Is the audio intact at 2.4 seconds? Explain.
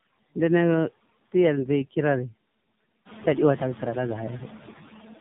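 No. Noise suppressor artifacts run through the whole clip, including 2.4 s: steady background is pulled down by about 13 dB, so the noise sinks between the words and rises under them. Tandem speech coding also spans the clip: the speech passed through two low-rate speech codecs in turn, which fits an iLBC leg followed by AMR-NB. It sounds rough, warbly and muffled, with nothing above 3.7 kHz.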